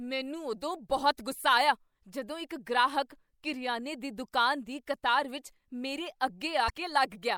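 A brief glitch cuts through the speech at 6.66 to 6.70 s, damaged data in a compressed stream that made the decoder misread frames and lose sync.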